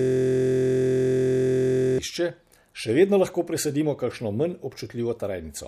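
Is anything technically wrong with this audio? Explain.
Yes. From the very start until about 1.98 s, the speech is caught in a system hang loop, already under way when the clip begins. The playback side stalled while the hardware kept replaying one 23.22 ms slice of its ring buffer, which fits a 1024-sample buffer. That slice repeats about 84 times, giving a steady buzz at 43.1 Hz. A waveform shows an identical short block tiled end to end, and a spectrogram shows harmonics spaced 43.1 Hz apart, flat over time.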